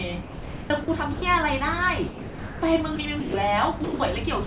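A speech recording, heard through a call path with nothing above 4 kHz (consistent with G.711), has sound dropped by the voice detector at 0.22–0.70, 0.84–0.88, 1.14–1.22, 2.08–2.62, 2.96–2.98, 3.20–3.34, 3.84–4.00 and 4.44–4.47 s. Each time the speech gives way to steady noise or near silence, most likely because the sender judged it to be background and comfort noise filled in. Unlike packet-loss concealment, nothing is stretched or repeated. The noise floor simply takes over and holds, and the faint room noise sits about 42 dB under the speech.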